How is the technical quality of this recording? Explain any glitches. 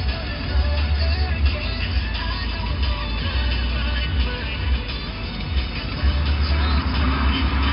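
Nothing here sounds amiss: there are no glitches to explain, and the sounds in the recording come across just as they should.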